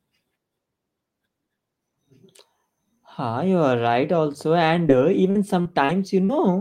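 At 4.87 to 4.91 s there is a short concealed packet loss: about 20 ms of audio arrived too late to decode, so the receiver extended the preceding sound and blended back. It is heard as a single brief smear or wobble, isolated, unlike the chain that follows.

From 5.31 to 6.31 s comes repeated packet loss, giving a robotic sound. Four separate gaps, the longest 43 ms, are each patched by continuing the last sound, with about 16% of the stretch concealed. The holes recur closely, so the result is choppy with pieces missing rather than one isolated blip.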